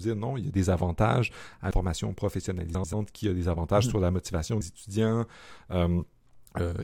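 At 1.71 s, just after "a des avantages à", and again at 4.61 s, after "mhm sur la motivation", the speech skips forward by roughly a tenth of a second and the two sides butt together with no silence. The regular 3-second spacing points to audio missing between chunks, likely from a recorder handing over between blocks.

From 2.75 to 2.94 s, just before "qui a des avantages", two adjacent blocks of about 93 ms each play in swapped order, which fits frames out of order. The stretch sounds like a brief garbled flutter, though no time is lost.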